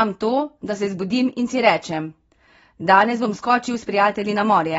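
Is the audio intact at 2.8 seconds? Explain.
No. At 2.8 seconds, as throughout the clip, the speech is dull and smeared with a fizzy edge on sibilants, and nothing sounds above 7.6 kHz. This is likely AAC compression at a low bitrate, around 24 kbps, coarsely quantising the spectrum and lowering the cut-off.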